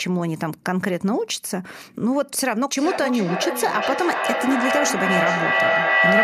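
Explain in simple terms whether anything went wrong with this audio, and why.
Something went wrong from 2.75 s to the end of the clip. A feedback howl takes over. Two devices in the same room are on one call. Each microphone picks up the other's loudspeaker, so the sound goes round in a loop. Every trip makes it louder, not quieter. It narrows to a shrill tone around 2 kHz and ends up louder than the speech. One trip round the loop takes roughly 0.4 seconds.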